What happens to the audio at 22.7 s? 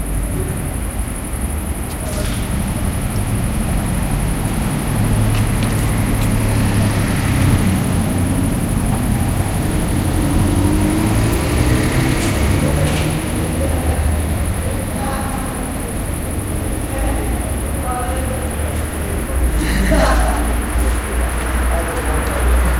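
At 22.7 s the audio is still carrying an unreliable data bit fault that began at 7.22 s and runs to the end at 22.80 s. One marginal data line flips its bit in a random share of samples, so each error adds a spike of identical size, a step of about -36 dBFS. It sounds like a steady crackle or fizz that persists through quiet gaps. Unlike ordinary hiss or scattered dropout clicks, every spike has the same amplitude.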